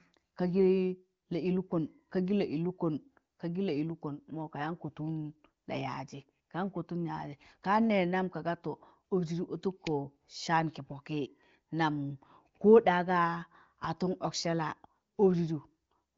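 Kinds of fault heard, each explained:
Nothing to flag here: the speech comes over an AMR wideband (HD Voice) link at 23.05 kbit/s, with the sound topping out around 7.7 kHz as you'd expect from that path, and no faults turn up anywhere in it.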